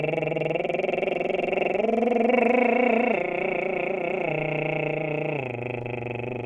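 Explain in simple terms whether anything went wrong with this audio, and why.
Throughout this music the playback runs at the wrong sample rate. The sound is played slightly slower than it was recorded, at about 0.92 times normal speed, and because nothing converts the rate, the pitch drops with it by about one and a half semitones. The ratio fits audio recorded at 24 kHz but played back at 22 kHz. Unlike a plain pitch change or a tempo change, both tempo and pitch drop here together, from start to finish.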